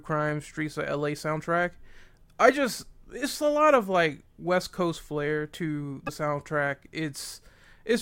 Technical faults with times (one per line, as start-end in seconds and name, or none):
6.06-6.09 broken MP3 bit reservoir